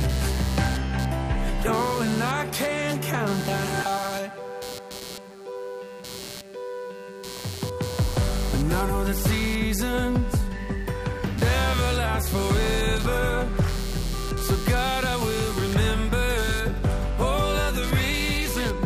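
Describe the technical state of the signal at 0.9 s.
At 0.9 s you're hearing computer activity noise, which runs through the whole clip: a buzzy, chirping pulse around 150 times a second, roughly 15 dB under the sound, from processor or graphics load shifting the shared ground.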